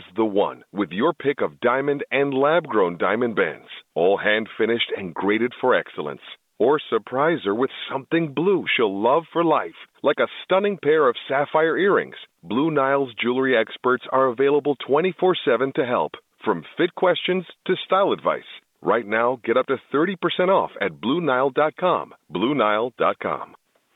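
No faults are audible in this telephone-band speech.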